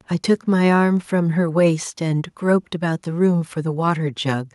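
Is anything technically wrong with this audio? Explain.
No, nothing technically wrong turns up anywhere in this speech recording.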